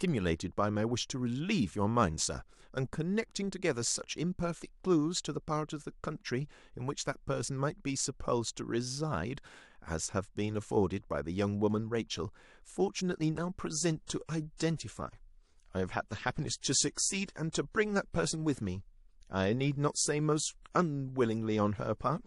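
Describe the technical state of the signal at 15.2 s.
At 15.2 s the speech is in an adaptive stream at a lower bitrate, from 13.72 s to the end. The stream switched down suddenly, with no gap. Codec artefacts are stronger, which fits a drop from roughly 128 to 48 kbit/s MP3.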